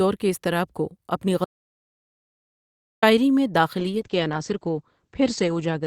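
Speech, with an audio dropout to silence from 1.45 s to 3.03 s: about 1.6 s vanishes into silence with no room tone, which separates it from a natural pause or a noise gate. It most likely comes from the input briefly disconnecting or being muted while recording continued. From 3.8 s to the end there is a call bitrate drop from 64 kbps to 10 kbps, bottoming out for about 1.8 s. The upper band shrinks from 20 kHz to 8 kHz, and the coarse coding grit sets it apart from simple low-pass muffling.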